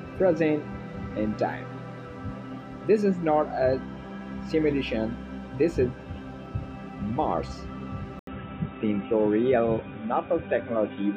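At 8.19 s the sound drops out for about 80 ms, then returns narrower and duller through to the end, with nothing above 3.8 kHz and a faint new background noise well below the signal. The overall level stays roughly the same. This is most likely an input switched to a poorer device, with the system changing its input mid-recording. A spectrogram shows a brief blank column at the switch and, after it, a flat ceiling at 3.8 kHz.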